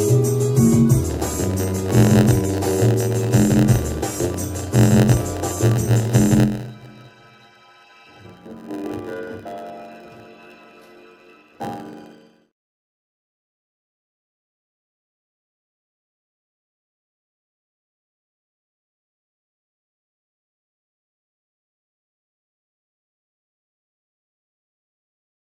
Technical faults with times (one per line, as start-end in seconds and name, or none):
1.09-25.48 block size mismatch (padded)